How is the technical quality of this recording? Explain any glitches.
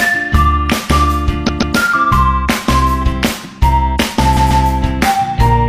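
The recording has two stutters from repeated frames, at 1.44–1.72 s and 4.32–4.60 s. Each time, a 139.3 ms block plays three times in a row. The compressed frames were stored more than once, so the decoder replays them. Each stutter adds 278.6 ms.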